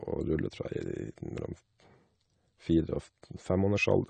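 Throughout, the speech carries plainly audible AAC compression, likely low-bitrate AAC-LC: nothing above 9 kHz, leaving it dull, smeared, and warbling on sibilants.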